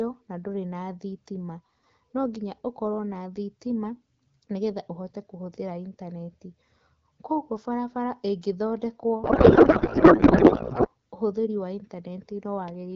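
From 9.23 s to 10.88 s the speech, carried at clear wideband quality that fits AMR-WB at around 12.65 kbit/s, gives way to a codec payload misread. The decoder takes each frame's bits from the wrong positions, likely because octet-aligned packing is being read as bandwidth-efficient. The speech becomes garbled, warbling noise that barely tracks it. On a spectrogram the harmonic striations dissolve into smeared broadband texture, and the waveform envelope stops following syllables until "ũhũthĩri wa".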